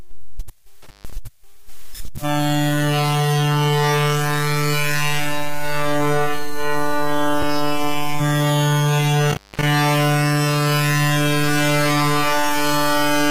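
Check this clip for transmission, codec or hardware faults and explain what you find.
Two kinds of fault turn up: an intermittent contact, twice, and one gap between stream segments.

The intermittent contact hits first from 0.82 to 1.13 s and again from 9.30 to 9.63 s. A loose plug or cable briefly loses connection, so the audio drops out for about 145 ms the first time and about 247 ms the second. You get crackle as the contact breaks and remakes, with faint hiss underneath while the line's open.

The gap between stream segments is a tiny hard-edged hole at 7.42 s, about 4 ms of silence. Two consecutive chunks of the stream have timestamps that don't quite meet, and the player fills the gap with silence, so nothing's actually lost. The stream comes in 6-second segments, which fits that kind of joining slip.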